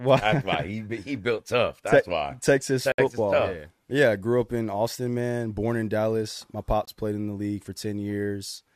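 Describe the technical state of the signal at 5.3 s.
At 5.3 s the speech signal is intact, with no dropout, distortion or other technical fault audible at that moment.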